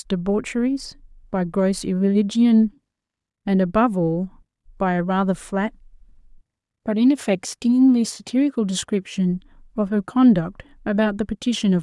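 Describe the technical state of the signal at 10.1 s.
At 10.1 s the speech signal is intact, with no audible technical fault at that moment.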